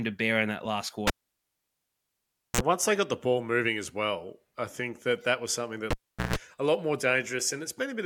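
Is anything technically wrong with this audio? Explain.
Yes, the cable gets pulled and plugged in twice: after "bear in that last" (1.07 to 2.61 s) and after "that that was something" (5.91 to 6.36 s). Each time there's a pop, a dead gap of 1.49 s and then 0.40 s, a 60 Hz buzz burst (44 ms, then 148 ms) while only the plug tip makes contact, and a second pop as the sound comes back.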